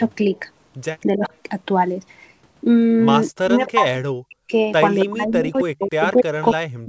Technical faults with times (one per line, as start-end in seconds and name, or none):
0.35-0.39 echo leak
1.12-1.31 speech suppressed in double talk
3.35-4.52 speech suppressed in double talk
3.67-3.71 echo leak
5.04-6.88 speech suppressed in double talk
5.56-6.46 echo leak